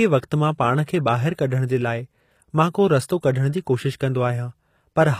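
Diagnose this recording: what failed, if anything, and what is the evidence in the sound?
The codec stage is at fault throughout. The treble is bright but gritty and lispy on s sounds, with nothing above 15.5 kHz, and harmonics don't line up across the crossover. This is likely HE-AAC compression rebuilding the highs by band replication, consistent with about 24 kbps, unlike plain low-pass dullness.

A brief hiss precedes an attack at 0.86 s, spreading about 14 ms ahead and softening the onset. This pre-echo comes from the codec's block noise filling the quiet before a late transient. Unlike a click or dropout, the noise leads the attack rather than interrupting it.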